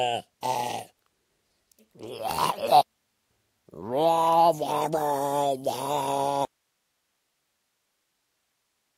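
A recording of sounds that suffers an audio dropout to a faint residue from 6.45 s to the end. The signal cuts off abruptly rather than fading, and what remains is only hiss, sitting roughly 50 dB below the previous level. Because the noise floor stays present instead of going to digital silence, the downstream path is still live and passing its own noise. The likely cause is a loss of the source feed, such as a disconnected cable or failed input stage, ahead of an active chain.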